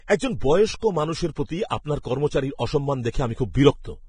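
Throughout the speech, likely heavy Vorbis compression, fitting roughly 23 kbps, removes everything above 9.7 kHz and turns the coarsely quantised treble into grainy hiss.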